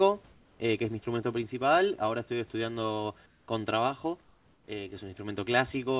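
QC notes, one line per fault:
0.32–0.60 s, 3.26–3.48 s and 4.24–4.68 s: comfort noise in place of the background. In these pauses of 280, 220 and 440 ms the room background, sitting about 33 to 36 dB below the loud parts, gives way to a flat, featureless hiss about 3 to 4 dB quieter, then the real background returns with the speech. This is likely discontinuous transmission: the sender stops sending during silence and the receiver synthesises shaped noise, here band-limited to 4 kHz like the G.711 narrowband call path.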